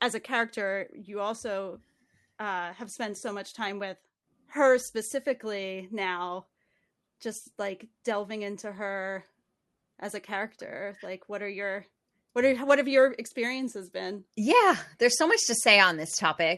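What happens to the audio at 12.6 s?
Nothing goes wrong at 12.6 s: the speech carries straight through that moment with no dropout, glitch or distortion, only the steady coding character of the call path, with its top end limited to about 12 kHz.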